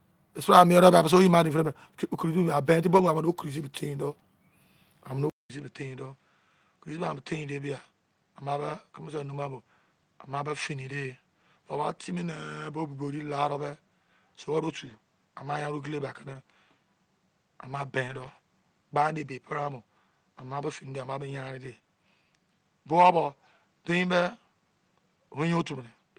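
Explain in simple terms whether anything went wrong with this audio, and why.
Lost packets rebuilt from error correction, at 1.63 to 1.65 s, 2.93 to 3.03 s, 10.47 to 10.49 s, 14.85 to 14.91 s, 16.33 to 16.35 s, 18.07 to 18.29 s and 19.25 to 19.27 s. Small pieces of the speech went missing in transit, but each following piece carried a rough spare copy, so the player used that instead of leaving a gap. Those moments sound briefly grainier and noisier, from 20 ms up to about 120 ms at 18.1 s.

Input switched to a poorer device at 5.3 s. The sound cuts out for about 200 ms, then comes back duller, slightly quieter, and with a faint new background hiss, and it stays that way until the end. Nothing above about 8.9 kHz remains after the switch, so the crisp top of the speech is gone. The recording likely changed microphones partway through, to one that picks up a narrower range of sound.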